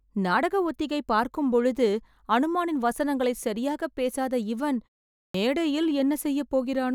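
Clipped start after a pause at 5.20 s in this speech clip. After "வசனங்களை சரியாக பேசாத இவன்" and a 0.4 s silence, the first 144 ms of the next phrase is missing, so it bursts in abruptly. The output device idled during the gap and needed that long to wake.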